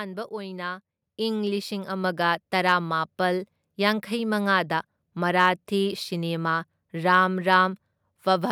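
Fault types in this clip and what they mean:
Microphone volume stepped up: At 1.02 s the whole recording jumps abruptly about 6 dB louder, the voice and the background noise rising together in one instant step rather than a gradual swell. That shared, sudden lift points to the call software judging the microphone input too quiet and raising the device's input volume in a single move, so everything captured after that moment arrives at the higher level.
Hard clipping: Two short bursts of crackly, gritty distortion sit on loud peaks of the speech, from 2.68 to 2.73 s and again from 5.39 to 5.49 s. The signal there runs about 2 dB beyond what a stage in the chain can carry, so the tops of the waveform are sliced flat. Those squared-off peaks add harsh high harmonics, heard as brief roughness rather than a continuous fuzz.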